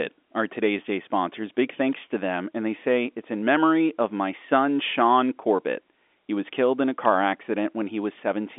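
At 1.93 s a sharp, dry snap cuts across the speech just before "to them", a single tight crack lasting only a few milliseconds and sitting on top of the telephone-band sound rather than replacing it. This is an electrical switching spike, most likely from a nearby switch, motor or static discharge arcing briefly and inducing a short burst of voltage into the audio line, which the G.711 telephone path then carried along with everything below about 3.8 kHz.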